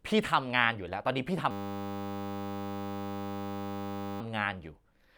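From 1.51 to 4.21 s the speech gives way to a system hang loop. The machine stalled while the sound hardware kept replaying one 10 ms slice of its buffer, so you hear a steady 100 Hz buzz until playback recovers.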